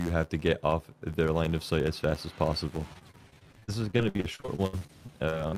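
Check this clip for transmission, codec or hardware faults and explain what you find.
Two faults are present: a steady block-rate buzz across the whole clip and a stretch of choppy, concealed dropouts near the end.

Filter restarted on every block, throughout: a regular buzz at 86.1 Hz rises and falls with the signal level. A filter is clearing its state at each block boundary, so every block starts from silence with a small transient. The rate fits a 512-sample buffer.

Repeated packet loss (robotic sound), from 2.93 s to 5.55 s: 23 short gaps, the longest 62 ms, cover about 23% of the stretch. Each hole is patched by extending the preceding sound, about 600 ms in all, leaving a choppy texture with pieces missing.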